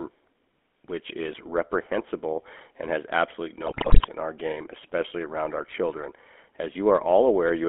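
From the first moment to the last, the speech carries the GSM full-rate codec sound. The voice is rebuilt from a vocal-tract model driven by a sparse, regularly spaced pulse train, so it comes out buzzy and gravelly, and the damage is plain to hear. The band is squeezed to roughly 250 Hz to 3.5 kHz, losing both the low body and the top air. The whole thing fits a 13 kbps GSM full-rate stream.

Between 3.66 and 4.07 s there's a burst of GSM bit errors. Corrupted bits got into the decoder, so the filter, pitch and gain values it used for those frames were wrong. The spectrum twists and the level jumps around for a bit under half a second. It comes out as squawks, pops and a gargling break in the voice. The density of the damage points to a link flipping a lot of bits, something like one in thirteen.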